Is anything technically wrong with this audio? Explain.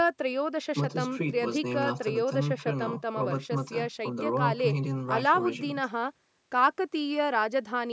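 No, nothing in this speech is technically wrong. It has been through a call's microphone processing, so the lowest bass is filtered out and nothing reaches above 8 kHz, both normal for that path.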